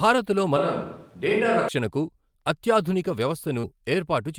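From 0.57 to 1.68 s the speech suddenly goes roomy and hollow, thinner in the bass, with a faint room noise sitting well below it, though the level barely changes. That's likely a switch to a distant microphone, then an abrupt switch back.

Around 3.6 s, between 3.59 and 3.65 s, there's a brief smear where about 40 ms of audio went missing. That's short concealed packet loss: the decoder stretched the preceding sound across the gap for roughly 38 ms, then blended back into the real signal.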